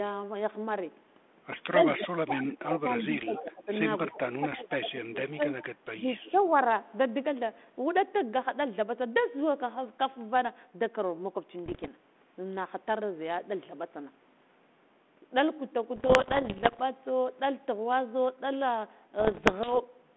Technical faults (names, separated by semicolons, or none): speech suppressed in double talk; echo leak; bit errors on an ADPCM link